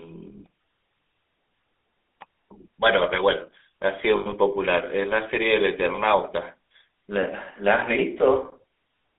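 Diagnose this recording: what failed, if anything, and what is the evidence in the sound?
The codec stage shows the signature of the GSM full-rate codec for the whole 9 seconds. The sound is confined to a telephone band of roughly 300 Hz to 3.6 kHz and carries a plainly audible buzzy, gravelly roughness, which fits GSM's 13 kbps full-rate mode. The encoder models the vocal tract as a filter and drives it with a coarse, decimated pulse excitation, so voiced sounds come back rasping rather than smooth.

Lost GSM frames at the network stage cause a dropout from 4.16 to 4.33 s. In place of fresh audio there is a rough, metallic ring, with about 120 ms missing across a 160 ms stretch and the longest gap lasting about a tenth of a second, which fits roughly six lost frames. The decoder conceals each missing frame by replaying the parameters of the last good one, so the sound hangs and rings.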